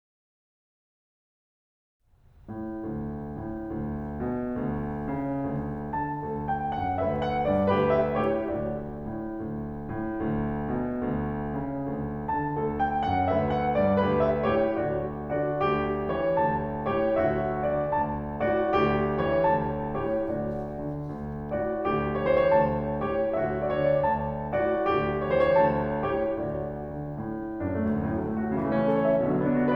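Right through the music there's a faint 50 Hz buzz riding on the signal, and that's the resampler restarted on every block. The 48 kHz to 44.1 kHz conversion ran on 20 ms chunks in isolation, so each edge gets a small error. Those errors repeat fifty times a second.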